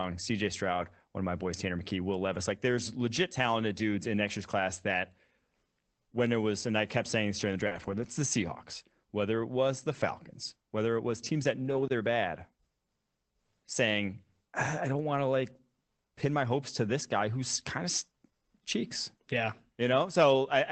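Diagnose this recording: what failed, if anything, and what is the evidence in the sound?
Network packet loss, repaired by the decoder as lost packets rebuilt from error correction. Rough, noisier patches occur at 0.73 to 0.83 s before "one of my boys", at 7.71 to 8.09 s, and at 11.65 to 11.87 s between "it was teams that" and "they're bad". There are no gaps. Following packets carried low-bitrate Opus copies, covering about 60, 200 and 120 ms.

Network again, as a short concealed packet loss. At 7.67 to 7.73 s, just after "saying this during the", there is a brief smear. About 40 ms never arrived. The receiver extrapolated the preceding sound to fill it, then blended into the rebuilt audio.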